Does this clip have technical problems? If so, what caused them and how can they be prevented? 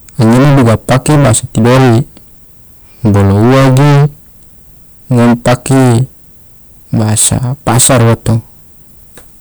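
Yes. The speech was driven about 24 dB past what a stage in the chain could pass, so hard clipping runs through the whole clip, with roughly a third of the samples sliced off flat at the ceiling. Those squared tops add dense high harmonics, so every loud sound carries a harsh, buzzing fuzz rather than just occasional crackle on peaks. Keeping gain low enough to leave headroom at each stage, and watching the meters for overload, prevents this.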